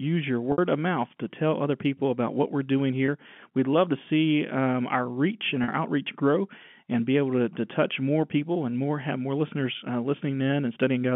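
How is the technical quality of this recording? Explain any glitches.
The recording is telephone-band speech, limited to roughly 150 Hz to 3.4 kHz by G.711 coding, with three short dropouts. Packet loss with pitch repetition appears at 0.52 s (60 ms, before "of mouth to tell"), 3.06 s (20 ms, after "about what we're doing") and 5.64 s (40 ms, before "outreach grow and be"). The receiver filled each gap by looping the last pitch period. The two shorter ones sound like a briefly held, buzzy stretch of voice, while the 60 ms one fades into silence before the speech returns with a short cross-fade.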